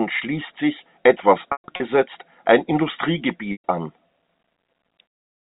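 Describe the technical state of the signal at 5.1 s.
At 5.1 s the signal is intact, with the speech carried cleanly through the G.711 telephone coding and no fault present.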